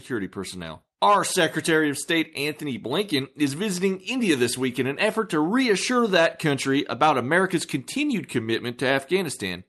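No technical faults are audible.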